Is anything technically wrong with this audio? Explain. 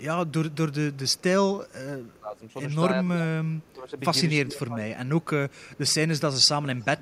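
Yes, two faults come from echo cancellation on the call.

An echo leak runs from 0.00 to 1.73 s, again at 3.62 to 3.74 s, and from 5.22 s to the end. A faint copy of the speech returns about 0.28 s late (276 to 282 ms), roughly 30 to 40 dB below the direct sound. It is likely the far end's loudspeaker feeding its microphone past an incomplete canceller. Room reverberation would smear into a tail. This is a discrete repeat at a fixed delay.

Speech suppressed in double talk occurs at 2.06 to 2.41 s, 3.14 to 3.25 s, 3.74 to 3.97 s and 4.42 to 4.78 s. The speech dips by about 10 to 20 dB for one or two tenths of a second to a third of a second each time, likely because the canceller mistook overlapping talk for echo and ducked it. Packet-loss dropouts would be abrupt gaps or glitches. These dips are level reductions that come while both sides overlap.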